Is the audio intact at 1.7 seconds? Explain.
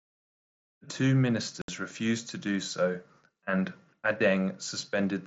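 No. Unconcealed Bluetooth headset packet loss cuts the speech from 1.62 to 1.69 s. Packets between headset and phone went missing and nothing filled the gap. The result is a hole of about 70 ms with abrupt edges, which fits several consecutive lost mSBC packets.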